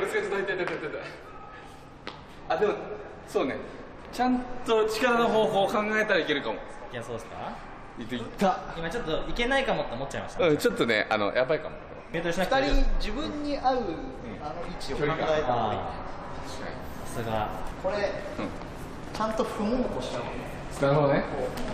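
Nothing in this recording stands out as a technical problem, so there's nothing to flag here.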